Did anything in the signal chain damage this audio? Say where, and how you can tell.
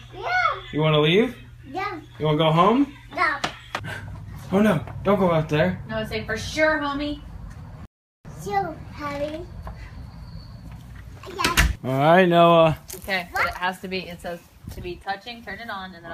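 Yes, a rebuffering stall at the playback stage: from 7.85 to 8.25 s the sound drops to silence for about 0.4 s, then resumes exactly where it stopped. Unlike a packet-loss dropout, nothing is skipped; the player simply starved and added time.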